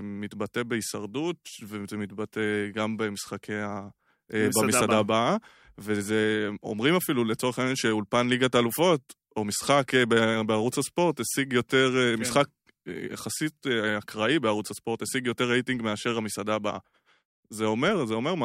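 No audible dropouts, clicks, distortion, level jumps or timing errors turn up anywhere in the speech.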